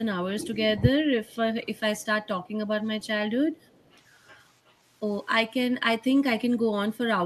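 A speech recording opens with what is likely an echo canceller failing during double talk. With both ends active from 0.00 to 0.83 s, it seems unable to tell the near talker from loudspeaker echo and turns everything down. The speech is suppressed in double talk, dipping by about 15 dB at its deepest and thinning or breaking up for roughly 0.7 s of that stretch. Later the likely cause is a loudspeaker-side canceller letting residual pickup through, heard as echo leak. A faint copy of the speech returns 326 ms late, roughly 35 to 40 dB below the main voice, in short scraps at 1.26–1.36, 1.99–2.05 and 3.01–3.07 s and a longer trail at 3.53–4.01 s.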